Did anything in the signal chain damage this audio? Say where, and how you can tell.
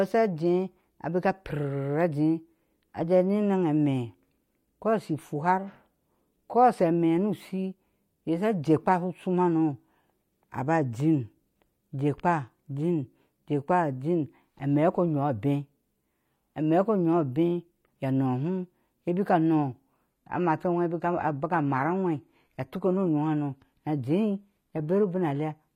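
Yes, at the network stage: from 20.11 s to the end, the speech abruptly drops to an adaptive stream at a lower bitrate, with no gap. The spectrogram shows a sudden ceiling at 14.9 kHz, and the treble turns synthetic. This fits a switch from 96 kbit/s AAC to 20 kbit/s HE-AAC.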